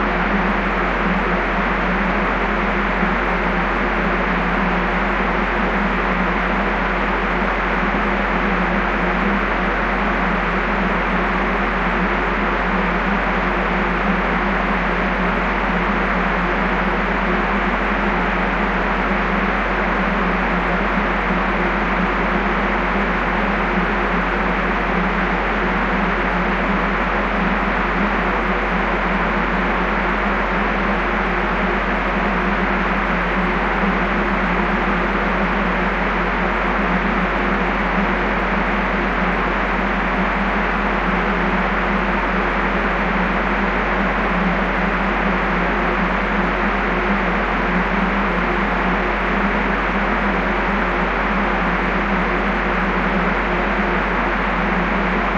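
Nothing in this recording of sounds stood out as a technical problem on listening.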